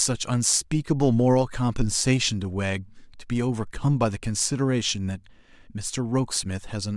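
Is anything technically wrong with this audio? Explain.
No technical faults are audible.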